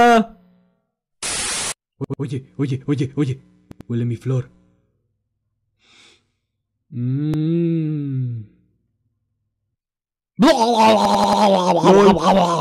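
Repeated buffers occur at 2.04, 3.72, 7.34, 9.29 and 11.05 s. Each time, new audio arrived late and the last block of about 93 ms, which fits a 4096-sample buffer, replayed two, two, one, one and four extra times. The result is audible stutters with hard joins.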